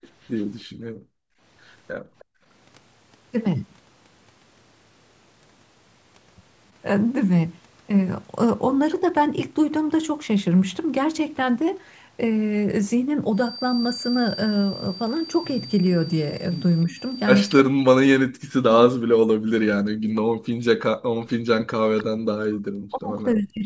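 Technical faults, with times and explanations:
0.02–0.08, 0.24–0.44 and 2.19–2.25 s, echo leak: faint scraps of a delayed copy of the speech come back about 312 ms late, roughly 30 to 35 dB down. That's likely a far-end speakerphone whose echo canceller didn't fully scrub what its mic picked up.
0.65–1.4 and 1.98–2.44 s, background gated by the echo canceller: the room sound sinks by up to about 30 dB and then comes back. The canceller clamped the mic hard while its loudspeaker was playing and let go once playback stopped.
16.86–16.98, 17.87–20.59 and 21.12 s to the end, speech suppressed in double talk: a slight dip of around 5 dB first, then long stretches where the speech is pushed down by roughly 40 dB. Likely both sides talking at once, so the canceller ducked both its own talker and the loudspeaker echo.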